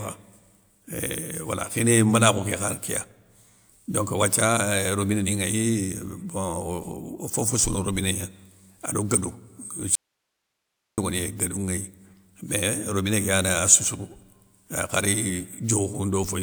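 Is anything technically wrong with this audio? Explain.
Yes, there's an audio dropout to a faint residue from 9.95 to 10.98 s. The speech cuts off abruptly for about a second, leaving only hiss roughly 55 dB down, likely a signal loss upstream while the path stayed live.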